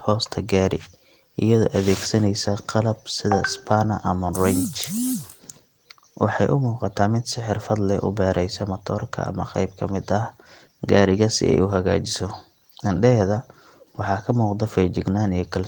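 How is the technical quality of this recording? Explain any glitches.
Nothing stood out on listening to this recording, and there are no glitches to explain.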